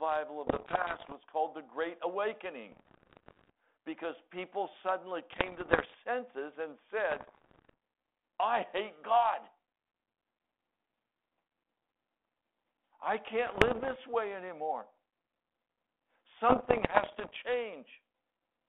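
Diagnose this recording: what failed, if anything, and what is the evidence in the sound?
Bit errors on an ADPCM link, a transmission fault: pops and rough bursts at 0.46–1.13, 2.72–3.50, 5.32–5.95, 7.10–7.74, 13.46–13.96 and 16.49–17.44 s, in a 250 Hz–3.4 kHz band fitting 32 kbit/s G.726. Each flipped bit derails the decoder's step size and predictor, ringing for milliseconds. The waveform shows spiky jumps in level, and the spectrogram shows vertical broadband streaks.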